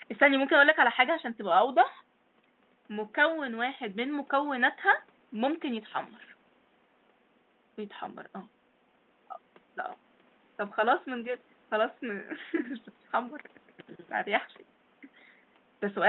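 No faults are audible in this speech recording; the room noise sits about 36 dB below the speech, and the top end rolls off near 8 kHz, as expected of a call codec at a modest bitrate.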